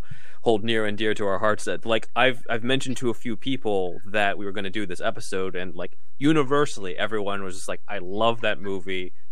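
DC offset runs through the whole speech clip: the waveform sits displaced from zero by a constant amount, about -21 dBFS. The shift itself is inaudible, but it eats into headroom and appears as steady energy at 0 Hz, beneath the lowest audible frequencies.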